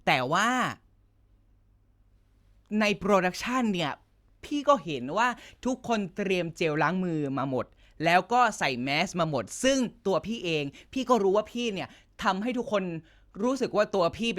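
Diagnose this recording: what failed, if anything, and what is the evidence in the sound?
Nothing failed here. Listening through the speech, no stage of the chain from capture to playback leaves any audible sign of trouble.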